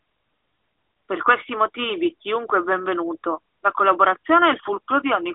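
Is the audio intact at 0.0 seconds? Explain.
Yes, the audio is intact at 0.0 seconds, with no fault present at that moment.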